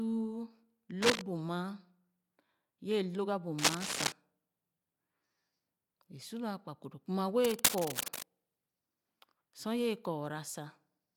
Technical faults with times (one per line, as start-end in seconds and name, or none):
1.02-1.21 cable scratch noise
3.58-4.13 cable scratch noise
7.44-8.25 cable scratch noise